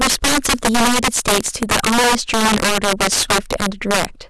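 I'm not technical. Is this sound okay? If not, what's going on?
No. Throughout the speech there is integer overflow: the loudest moments are pushed past what the digital numbers can hold, so they flip to the opposite extreme. A small share of peaks become sharp, violent cracks, much harsher than clipping's flattened, fuzzy distortion.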